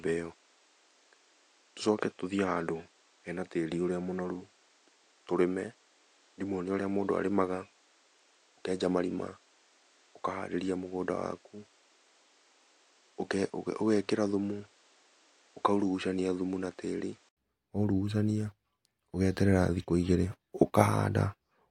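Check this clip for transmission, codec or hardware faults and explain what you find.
One fault is present: the input switched to a poorer device. From the start until 17.37 s, the speech passes nothing above 9.3 kHz. It sounds duller and about 5 dB quieter, over a noise floor roughly 35 dB down. At 17.37 s an 80 ms silence precedes a fuller, brighter sound, likely from a change of microphone or headset profile. On a spectrogram, a hard ceiling at 9.3 kHz ends at a blank gap. The waveform shows a step up in level.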